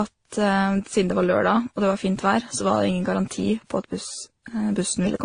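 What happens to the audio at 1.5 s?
At 1.5 s, as across the whole clip, the speech carries the layered, mixed artefacts of transcoding between lossy codecs, with nothing above 9.8 kHz. It was likely encoded several times in succession, each stage re-coding earlier damage and adding its own.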